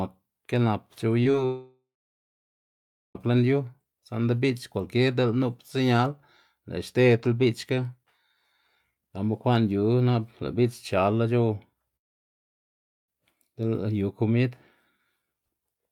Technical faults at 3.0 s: long network dropout

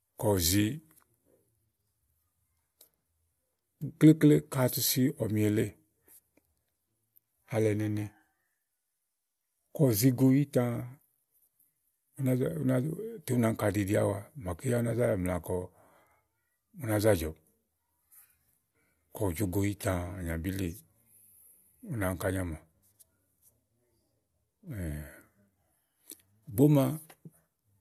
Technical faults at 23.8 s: none

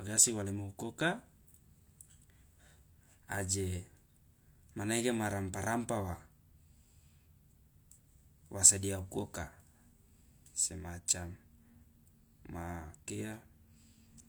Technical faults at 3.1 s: none

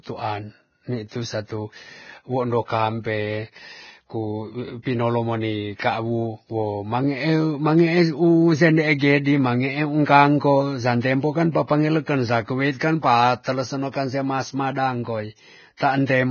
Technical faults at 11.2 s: Vorbis compression

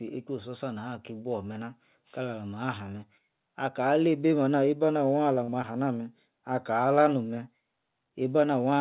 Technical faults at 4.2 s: none

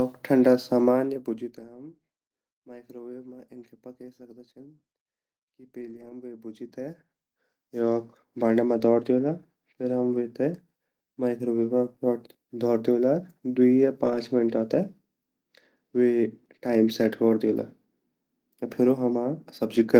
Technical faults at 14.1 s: lost packet rebuilt from error correction

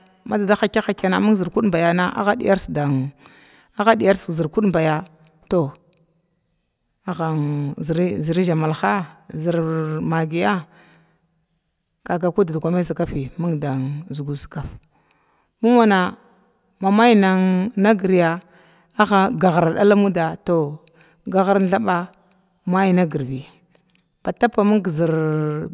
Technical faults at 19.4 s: none

